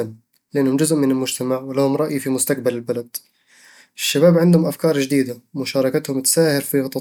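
No technical faults can be heard anywhere in this recording.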